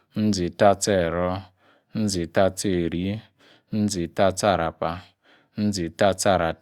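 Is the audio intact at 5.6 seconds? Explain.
Yes, the audio is intact at 5.6 seconds, with no dropout, glitch or other fault at that point.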